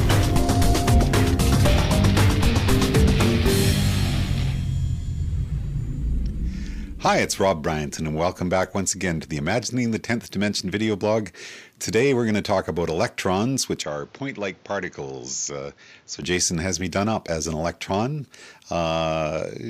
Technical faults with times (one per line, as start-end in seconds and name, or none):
13.82-16.23 input switched to a poorer device